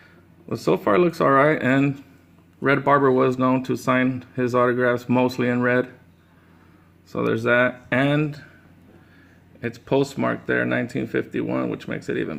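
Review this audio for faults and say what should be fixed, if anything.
No faults; nothing needs fixing.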